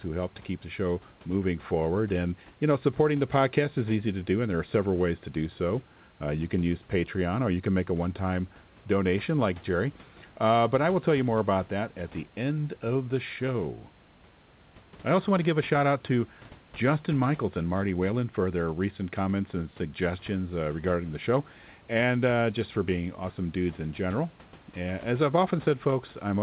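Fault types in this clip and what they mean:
No fault types are present in this clip.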